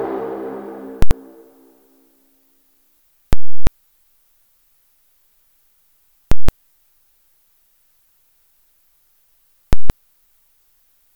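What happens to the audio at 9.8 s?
Right there the audio slams to one extreme value from 9.73 to 9.90 s, a classic case of invalid numbers at full scale. Some calculation blew up to infinite or invalid values that got pinned at the maximum, so you hear a loud pop going in, dead nothing for about 170 ms, then another pop coming out. That span fits an 8192-sample block.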